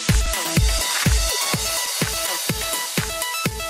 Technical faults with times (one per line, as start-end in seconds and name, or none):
0.00-3.69 clock drift between sender and receiver
0.16-3.55 repeated timing corrections
0.26-2.77 scattered short gaps